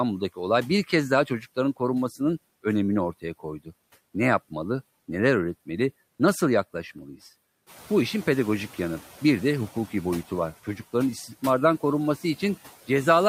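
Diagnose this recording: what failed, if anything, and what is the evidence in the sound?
Noise suppressor artifacts run through the whole recording, a call-processing fault. Between words the background drops by about 15 dB and returns under the speech. The suppressor estimates which frequency bands hold steady noise and attenuates them frame by frame, so the floor pumps with the talker. The room noise, itself part of the recording, rises by about 13 dB around seven and a half seconds and then sits about 19 dB below the speech.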